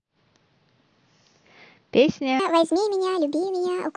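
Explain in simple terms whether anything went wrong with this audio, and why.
A wrong sample rate problem starts at 2.40 s and lasts until the clip ends at 3.97 s. From that point the speech suddenly sounds high and hurried, running 1.5 times too fast and about 7 semitones higher in pitch. This happens when audio is played back at a faster rate than it was recorded at, with no conversion in between, so speed and pitch rise together. The ratio fits sound captured at 16 kHz being played at 24 kHz.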